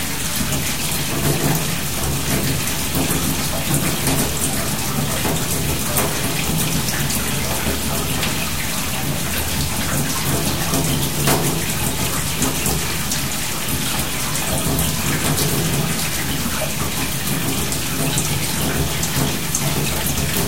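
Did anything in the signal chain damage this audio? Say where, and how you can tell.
Yes. Throughout the whole clip of sounds, the audio carries grainy distortion that tracks the signal, with the error sitting only about 10 dB below it. This is low bit depth without dither, likely introduced at a sample-format conversion stage where samples were truncated to about 5 bits. With so few steps and no dither, the quantisation error stays correlated with the signal instead of spreading into neutral noise, so it rises and falls with the sound itself.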